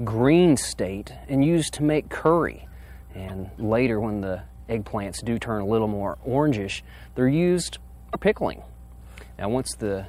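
A mains hum runs from start to finish. It is a steady low tone at 60 Hz with some low harmonics above it. It sits roughly 20 dB below the signal. The power line is leaking into the signal path, through a ground loop or a nearby transformer. Because the tone never changes, it forms a constant drone under everything else.

At 3.28 to 3.30 s the audio skips ahead. A brief chirp, burst of noise or short hole fills the gap. The same thing happens at 8.13 to 8.15 s. Each glitch lasts under 30 ms, about one frame long. The likely cause is a broken MP3 bit reservoir. Frames were cut out, so the next frame reached back for borrowed data. It found bytes from the wrong frame and decoded them as garbage.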